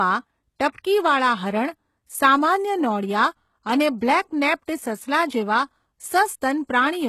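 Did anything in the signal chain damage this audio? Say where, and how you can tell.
Yes, at the codec stage, and it runs the whole length. The speech has nothing at all above about 12.3 kHz, a hard ceiling that a 256 kbit/s MP3 wouldn't impose on its own, plus the smeared, thin texture of a very low-bitrate encode. That combination is the classic signature of low-bitrate audio saved at a high bitrate: likely a 16 kbit/s HE-AAC file re-encoded to MP3. The second pass preserved the damage and couldn't restore what was lost.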